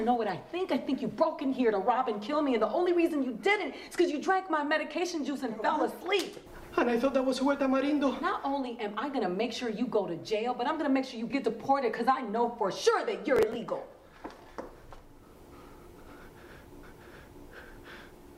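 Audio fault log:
13.36–13.55 s: processor overload crackle, a brief gritty burst where roughly seven very short buffers, around 1.5 ms each, were skipped, leaving hard-edged gaps.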